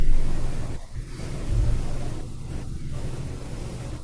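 No technical faults can be heard in this speech recording. Nothing in the signal draws attention to itself at any point.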